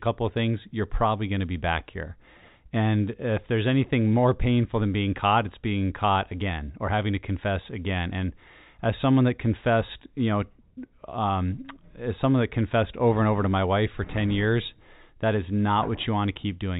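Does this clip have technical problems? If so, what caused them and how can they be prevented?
No, there are no technical problems to prevent: the speech is carried over G.711 telephone coding, which limits it to the band below 4 kHz as expected for that format.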